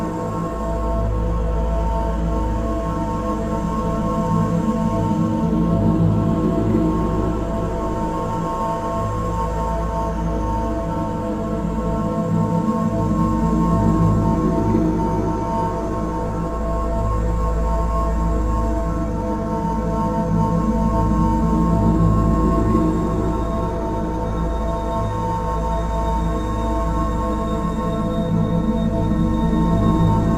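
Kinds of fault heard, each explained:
No kinds of fault are heard in this audio.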